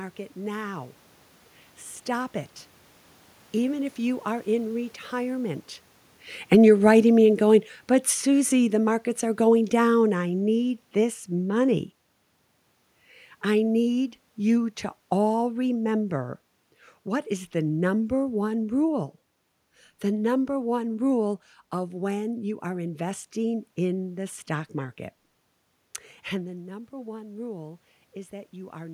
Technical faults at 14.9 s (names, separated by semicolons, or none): none